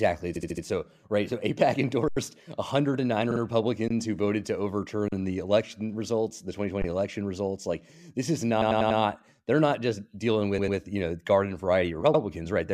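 Right at the start, 0.35 to 0.64 s, there's repeated frames: a 72 ms block of compressed audio gets played four extra times, so you hear a stutter, adding about 0.29 s. At 2.08 to 2.17 s comes an underrun with held sample. The output buffer runs dry for 85 ms, which fits a 4096-sample buffer, and the converter freezes on its last value. The sound just goes flat, with barely a click. Nothing is lost, so it picks up softly where it stopped.

At 3.30 to 3.40 s a 48 ms block repeats twice more. Then there are three shorter held-sample dropouts, each ending softly. The first is at 3.88 to 3.90 s, just before "who voted to". The next is at 5.08 to 5.12 s, between "who voted to" and "the election results the". The last is at 6.82 to 6.84 s, right before "election results". The stutters return at 8.61 to 8.99 s, where a 96 ms block plays four extra times, and at 10.57 to 10.77 s, where a 96 ms block plays twice more. 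The final one is at 12.13 to 12.21 s, a single extra 72 ms pass.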